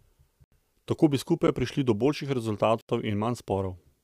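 A speech recording with three blocks of digital silence: 80 ms holes from 0.44 to 0.52 s and from 2.81 to 2.89 s, and a 10.6 ms one at 1.47 s that registers as a single tick. Each drops abruptly to silence and returns with no fade. That hard, dead-flat gap distinguishes it from a fade or concealed packet loss, and points to the output buffer not being filled in time.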